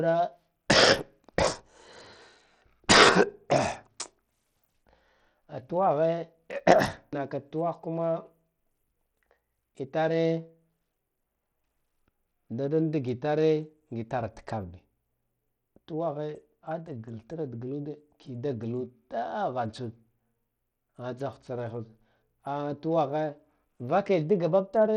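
From start to finish, the speech carries a gritty, grainy edge. The top end is thin and unstable, with treble that flickers in and out instead of holding steady. This is likely Bluetooth SBC compression at a low bit pool. The codec splits the sound into a few wide bands and starves the upper ones of bits. The coarse quantising fits a bitrate near 80 kbps, and the damage is plainly audible.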